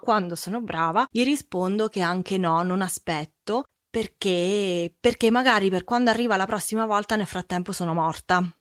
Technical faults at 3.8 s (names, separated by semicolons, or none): none